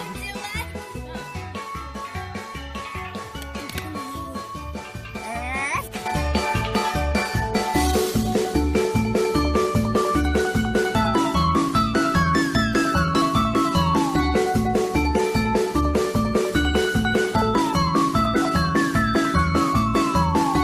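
No faults detected anywhere in the audio.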